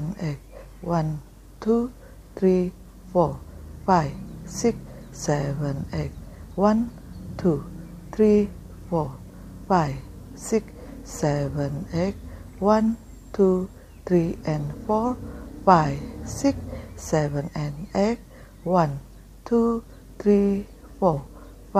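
No technical faults can be heard anywhere in this audio.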